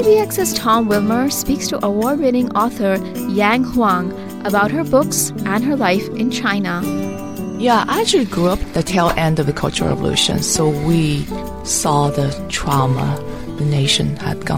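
Nothing goes wrong anywhere in this recording; there's simply no technical fault to point to from beginning to end.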